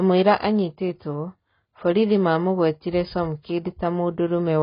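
From start to finish the speech is dull and smeared, with nothing above 5.1 kHz and a warbly, fizzy texture on sibilants and held sounds. That's likely AAC compression, and the heavy damage suggests something like AAC-LC at around 16 kbps.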